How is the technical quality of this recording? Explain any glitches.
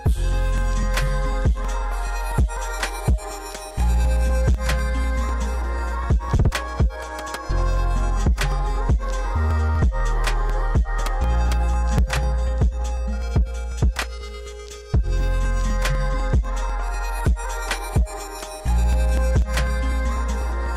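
The recording has a steady ticking fault across nearly its whole length and two brief stutters, which clearly degrade its technical quality.

From 0.08 s to 20.66 s there are periodic USB or driver dropouts: every 0.248 s, roughly 2 ms of audio is skipped when the bus or driver stalls. The result is evenly spaced ticks during signal. Their strict regularity sets them apart from random buffer glitches.

At 1.65 s and 17.25 s, a repeated buffer occurs: late data made the device replay its last 2.67 ms block, which fits a 128-sample buffer. The first repeats once and gives a single click. The second repeats four times and gives a short buzz. Unlike the dropouts, these occur only twice and repeat material instead of skipping it.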